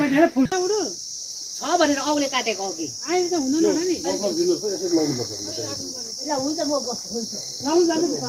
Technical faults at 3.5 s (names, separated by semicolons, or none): jitter buffer speed-up